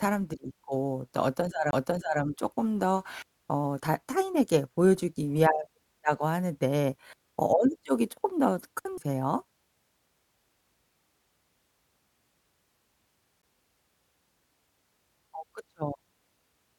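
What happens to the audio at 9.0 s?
At 8.98 s there is a CD skip: a knock or flaw makes the laser jump tracks, giving a very brief mute and tick as the speech resumes elsewhere.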